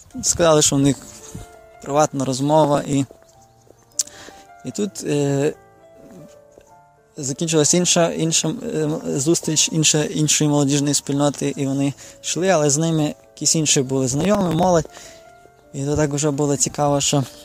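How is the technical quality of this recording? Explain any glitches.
The recording has two bursts of processor overload crackle, from 2.64 to 2.93 s and from 14.13 to 14.64 s. In each, the processor fell behind and missed buffer deadlines again and again. Each missed buffer was skipped, leaving a tiny hard-edged hole. The holes come very fast, which fits buffers of around a millisecond and a half. They merge into a gritty tearing over the sound. The second burst lasts longer, and both stop when the load passes.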